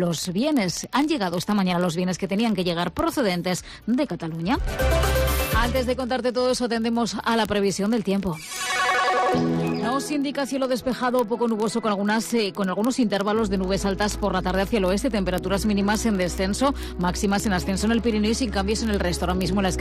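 From 0.11 s to 19.80 s, word clock ticks run continuously: a sharp click roughly every 20 ms, around a thousand in all, uneven in strength. The receiving device is free-running on its own clock, about 0.1 percent off the sender's, so the two keep slipping and a single sample is dropped or repeated at each slip. On a waveform each tick is a one-sample discontinuity; a spectrogram shows evenly spaced thin vertical lines reaching into the high kHz range.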